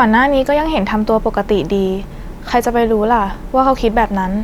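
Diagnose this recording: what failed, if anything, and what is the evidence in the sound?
Nothing in this speech recording points to a failure at any stage of the chain, so there's nothing here to diagnose.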